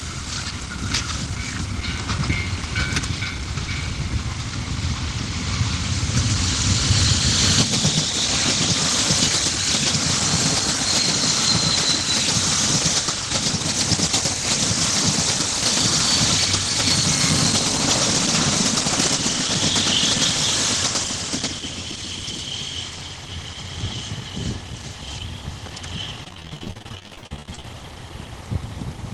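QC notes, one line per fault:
26.24–27.74 s, repeated packet loss (robotic sound): over this 1.5 s stretch the stream breaks up into a rapid run of short dropouts, the longest about 47 ms. Each hole is bridged by extending the last received sound, and the next loss arrives before the patch can settle, so nearly half the span is concealed rather than real. That constant stitching gives the choppy texture with pieces missing, heard against the call path's roughly 12 kHz bandwidth, consistent with Opus.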